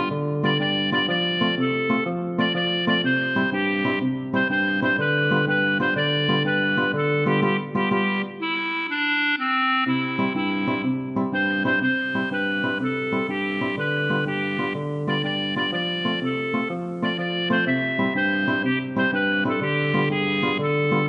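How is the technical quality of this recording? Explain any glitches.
The recording has one clear fault: a digital radio blending to analogue event between 11.80 and 17.46 s. The receiver lost its digital signal and cross-faded, over about 0.37 s, to the station's FM broadcast, then blended back at 17.46 s. During that stretch the audio is about 3 dB quieter and carries a steady FM hiss, faint at roughly 40 dB below the signal, that is absent from the digital sections on either side.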